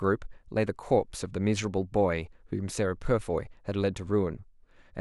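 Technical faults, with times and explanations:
No technical faults are audible anywhere in this speech recording.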